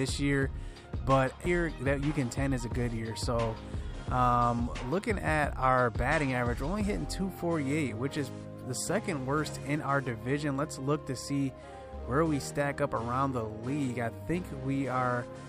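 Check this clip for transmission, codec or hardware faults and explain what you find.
One fault shows up, a CD skip at 1.46 s. The laser jumps to another turn of the spiral, leaving a tick from a mute of a couple of milliseconds. Unlike a dropout, the sound resumes from a different place rather than where it stopped.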